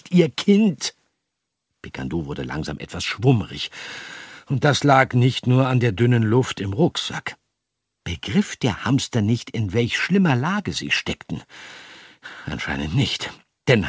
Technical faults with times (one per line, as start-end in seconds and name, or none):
none